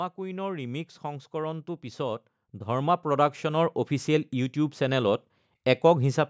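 Automatic gain rising affects this speech recording: the gain control judged the input too quiet and kept pushing its gain up from 0.15 s to 4.84 s, by about 14 dB in total. The voice and the background noise therefore swell together in one slow climb over more than four seconds. The audio has been through call microphone processing, and nothing is present above 8 kHz.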